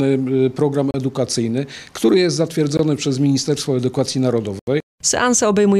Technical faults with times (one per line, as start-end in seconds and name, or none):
0.91-0.94 block of digital silence
2.77-2.79 block of digital silence
4.59-4.67 block of digital silence